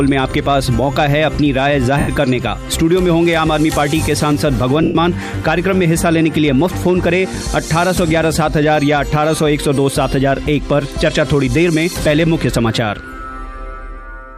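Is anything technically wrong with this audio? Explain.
Yes. There are lost LE Audio frames at 1.99 to 2.08 s (90 ms) and 4.83 to 4.95 s (120 ms). The LC3 decoder reuses the last spectrum with random signs, fading it out. The result is a brief noisy smear that shows as a flat, blurred spectrogram band and a decaying waveform envelope.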